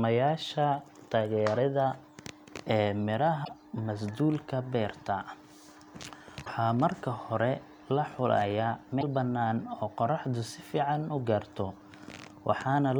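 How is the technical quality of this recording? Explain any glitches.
The recording has three short glitches of one kind, spread through the speech.

Damaged data in a compressed stream, at 3.41 to 3.49 s (just before "masduulka beerta"), 6.42 to 6.48 s (just before "marka hore la xulayaa") and 8.98 to 9.03 s (between "marka hore la xulayaa" and "bannaan oo qoraxdu"). Corrupted bytes in the compressed file made the decoder misread those frames and lose sync until it found the next valid header. Each event, lasting about 55 to 85 ms, breaks through the speech as a brief chirp, squawk, click or short hole.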